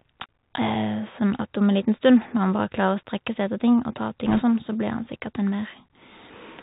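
From start to finish the speech sounds boxed-in and dull, with nothing above 4 kHz, a grainy hiss beneath it and scratchy, splattering s sounds. That is the Bluetooth CVSD headset codec, which fits a 64 kbps link: one up-or-down bit per sample cannot follow fast, loud high-frequency movement. Between 4.26 and 4.42 s a brief rushing crackle sweeps over the speech, with no sharp clicks. These are bit errors on a Bluetooth voice link, at around 2 percent. Each flipped bit nudges the signal only slightly and its effect fades, so the damage comes out as noise.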